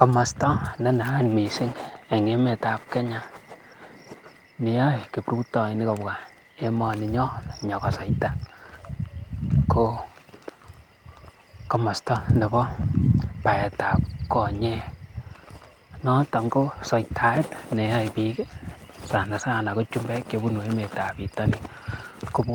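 No faults heard anywhere in the speech recording; nothing in the signal chain calls for comment.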